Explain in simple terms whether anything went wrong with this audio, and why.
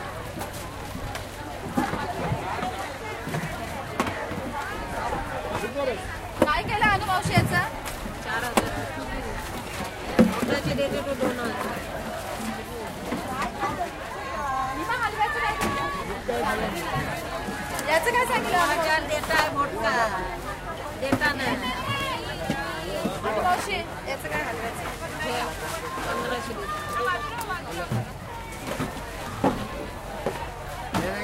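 At 15.50 to 15.65 s, two sharp pops sound over the audio, which carries on underneath: a loud pop, likely from a sudden electrical jolt like a plug or switch.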